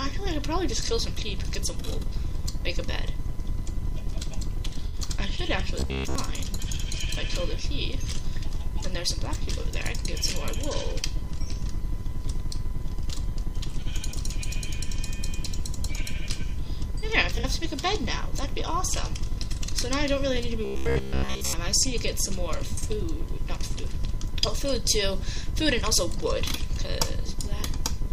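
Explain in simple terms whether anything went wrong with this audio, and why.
Yes. At 4.87 to 4.95 s and 17.35 to 17.53 s there is AAC frame loss with concealment. Pieces of the compressed stream went missing, about 64 ms, then 85 ms in scattered gaps. The decoder guessed the gaps from the last good piece, leaving brief smeared, noisy patches.

From 5.80 to 6.15 s and 20.65 to 21.53 s the sound becomes a rigid metallic buzz at about 67 Hz. This is robotic sound from repeated short buffers, likely because audio arrived too late and the player kept repeating the same 15 ms slice.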